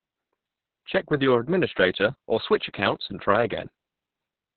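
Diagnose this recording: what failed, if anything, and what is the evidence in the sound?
The codec's the culprit: heavy Opus voice compression across the whole clip. Nothing reaches past 4.5 kHz, so the speech sounds muffled and a bit hoarse and robotic. That narrowband, SILK-only sound fits a starved bitrate of around 6 kbps, with the excitation coded coarsely.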